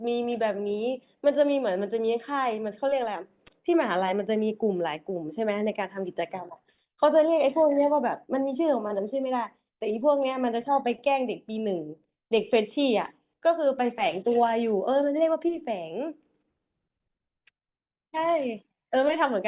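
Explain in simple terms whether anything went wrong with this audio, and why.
Nothing stood out as wrong when listening to this recording; the speech comes across steadily with no audible glitches or interruptions.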